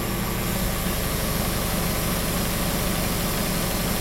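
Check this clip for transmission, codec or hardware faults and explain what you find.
One hardware fault is present. Mains buzz runs throughout the clip: sharp switching spikes at twice the 60 Hz mains rate leak in, adding harmonics up to several kHz, heard as a steady raspy buzz around 15 dB below the sound.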